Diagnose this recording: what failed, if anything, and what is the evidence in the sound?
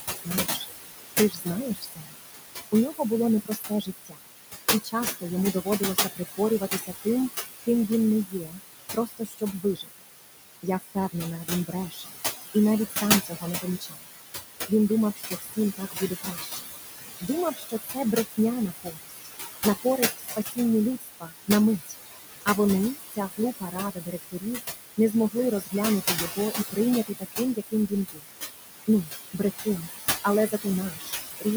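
Throughout, the background sinks between phrases and swells back under the speech, leaving a residue. These are noise suppressor artifacts from call processing: the room noise, only about 4 dB below the speech, is pulled down by about 17 dB frame by frame.

Soft consonants and word endings sound swallowed at 0.01–0.65, 1.3–4.23, 4.84–7.06, 7.62–10.07, 10.63–28.28 and 28.87–31.46 s. This is speech cut by the noise suppressor. It misreads quiet speech as noise and turns it down by up to about 22 dB, for several seconds in total across the long middle stretch.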